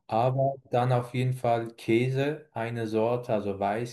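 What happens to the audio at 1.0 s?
Nothing goes wrong at 1.0 s; the speech there plays through intact, with no dropout, click, glitch or other audible fault.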